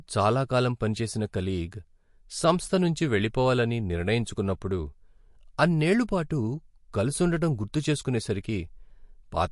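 MP3 compression damage runs throughout: the speech stops dead at 11.3 kHz and has a plainly audible watery, swirling texture with smeared onsets. The encoder was likely short of bits, fitting a bitrate near 48 kbps, so it cut the treble and let faint frequency lines flicker between frames.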